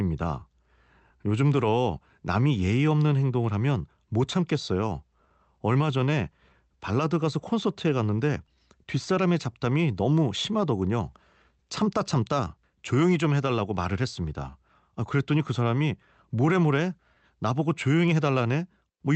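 Throughout the speech there is a faintly uneven pace, the mark of clock drift between sender and receiver: the sending clock runs about one and a half percent slow. From 0.40 s to 18.93 s, repeated timing corrections show up as scattered, irregular small hiccups, with the speech running at about 98% speed, as the receiver repeats short slices to fill the gap, adding roughly 0.3 s in total.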